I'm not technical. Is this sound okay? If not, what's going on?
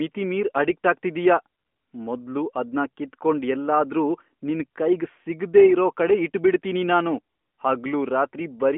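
Yes, it's okay: nothing is wrong with this speech, which simply has the narrower, phone-call tone that the AMR narrowband mobile codec gives ordinary mobile calls.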